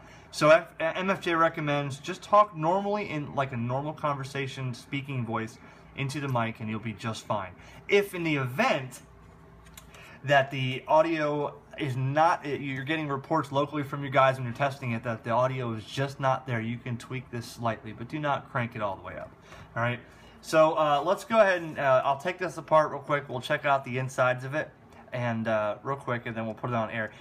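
No technical fault can be heard anywhere in the clip. Nothing in the audio points to a problem in how it was recorded, carried or played back.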